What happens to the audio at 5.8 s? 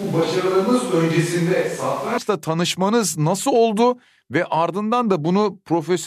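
Nothing goes wrong at 5.8 s; the speech carries on intact through that moment.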